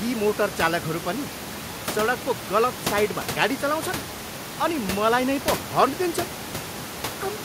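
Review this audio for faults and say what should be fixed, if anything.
Nothing needs to be fixed, as the review of this audio turns up no faults.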